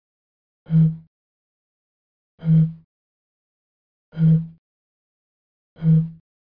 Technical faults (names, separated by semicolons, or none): none